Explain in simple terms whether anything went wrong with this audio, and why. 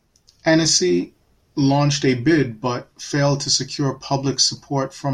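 Nothing went wrong with this recording; no technical fault can be heard anywhere in it.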